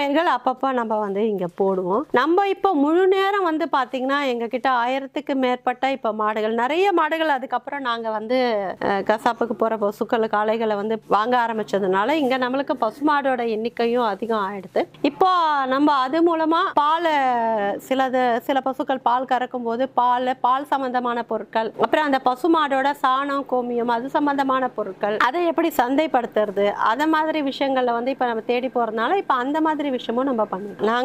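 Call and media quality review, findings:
No audible faults found.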